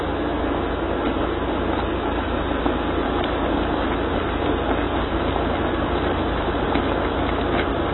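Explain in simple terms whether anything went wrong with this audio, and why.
Yes, something's off, and it runs through the whole clip. Everything sounds dull and a bit smeared, because nothing comes through above about 4 kHz, so the crisp top end is simply gone. Sustained parts take on a warbly, fizzy texture too. The likely culprit is AAC compression squeezed very hard: the encoder throws away detail it thinks you won't miss, but at this strength you clearly do.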